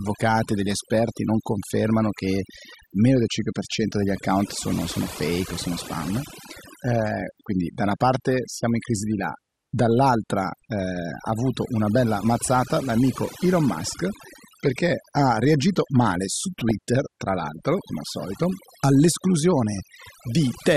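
From start to finish the noise removal is overdone. The reduction was set so hard that bands near the noise floor get pulled right down, taking quieter parts of the speech with them, so the background drops and breaks up into little twinkling specks.

Also running the whole way through is a dull, gurgly, granular quality, with the top end sounding switched off and bands flickering in and out. That's likely MP2 compression starved of bits, and the damage fits a rate around 80 kbps, with the surviving sub-bands coarsely quantised.

Then, from 16.59 to 16.71 s, right after "ha reagito male su" and just before "tra l'altro come al", there's a short burst of DAB burbling. It comes from bit errors from weak reception that slipped past error correction into the MP2 data. Wrong samples put short blips of noise into individual sub-bands across what sounds like about a dozen frames, consistent with a bit error rate of roughly 0.3 percent.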